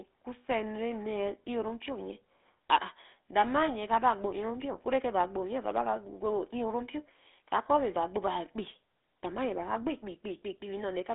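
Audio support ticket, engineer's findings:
GSM full-rate codec, whole clip. Buzzy, gravelly speech from coarse pulse-excited vocal-tract modelling; band 250 Hz to 3.6 kHz, nothing above 3.8 kHz; fits a 13 kbps coder.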